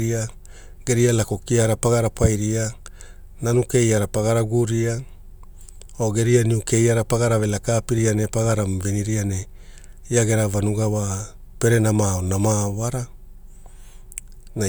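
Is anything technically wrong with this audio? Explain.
No, nothing technical stands out here; the speech comes across steady and intact the whole way, with nothing that sounds amiss.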